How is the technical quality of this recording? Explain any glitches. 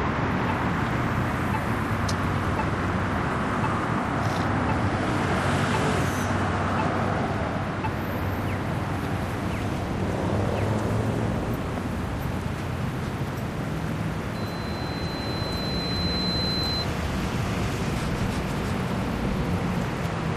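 The recording has one clear fault. Loudspeaker feedback squeal appears from 14.34 to 16.87 s. A microphone is picking up the speaker it feeds, and the loop gain exceeds one at 4.1 kHz. That tone swells over about two seconds into a squeal roughly as loud as the sound itself.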